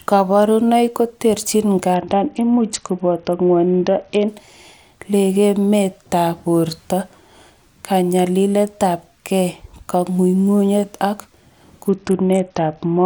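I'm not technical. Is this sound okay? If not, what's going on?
No. From 1.94 to 4.28 seconds, and again from 11.89 seconds to the end, the speech turns dull and gritty. This is a Bluetooth SBC bit pool drop. A crowded wireless link forced the phone to send far less detail, losing the crisp high sounds.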